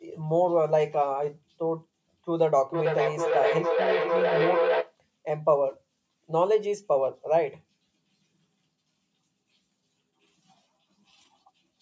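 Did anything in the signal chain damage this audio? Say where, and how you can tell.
Yes. A feedback howl between 2.74 and 4.97 s comes from the call path, where two devices sharing a room close an acoustic loop from loudspeaker back into microphone. The tone settles around 500 Hz and pulses roughly every half second, matching the loop's delay, and climbs to about 1 dB below the speech. Plain acoustic echo would give repeats that fade; here each trip adds gain until the loop is broken. The missing content above 8 kHz is the call's normal band limit.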